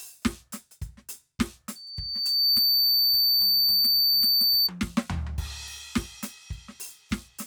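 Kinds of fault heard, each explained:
Loudspeaker feedback squeal: a microphone re-amplifying its own loudspeaker until one frequency runs away. A 4.6 kHz tone swells within a second from 1.75 s to about 10 dB above the music, lasting to 4.70 s. Unlike a steady interference whistle, it grows rather than starting full.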